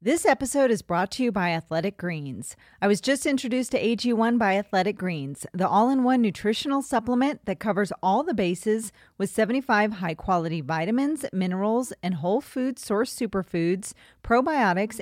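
No audible technical faults occur anywhere in this recording.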